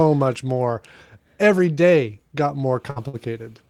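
At 2.90 s, just after "day got", a burst of packet loss replaces about 60 ms of speech with a decaying continuation of the last sound, visible as a flattened, fading smear before an abrupt jump.

At 3.08 s a short stall from a late packet stretches the last sound for about 58 ms, showing as smeared horizontal bands, then speech resumes intact.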